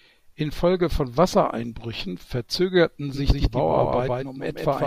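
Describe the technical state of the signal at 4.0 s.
At 4.0 s the speech is heard twice: a second full-band copy trails the original by roughly 150 ms, a few dB quieter, with no decay or room colour. This doubled audio track starts abruptly at 3.14 s and runs to the end, likely from a slower second capture path.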